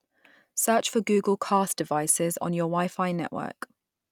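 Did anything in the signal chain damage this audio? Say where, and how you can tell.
No, nothing in the signal chain has damaged this speech recording. No stage between capture and playback has left a mark that can be heard.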